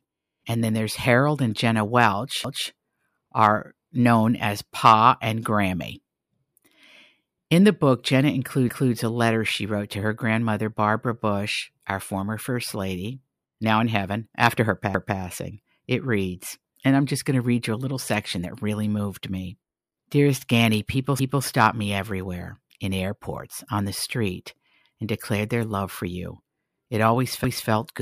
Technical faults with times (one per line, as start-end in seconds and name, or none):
2.44-2.69 overlapping chunks
8.69-8.94 overlapping chunks
14.94-15.19 overlapping chunks
21.19-21.44 overlapping chunks